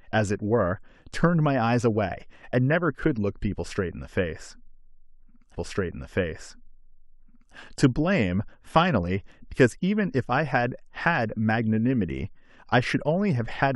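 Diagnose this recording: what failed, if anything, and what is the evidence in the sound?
A stream segment repeated at the playback stage. At 5.54 s the speech jumps back and plays about 2.0 s of material a second time, running until 7.54 s. A small blip marks the jump where the repeat begins, and the clip is lengthened by the same 2.0 s. This points to the player fetching or queuing the same stream segment twice. The duplicate length fits a segment duration of roughly two seconds.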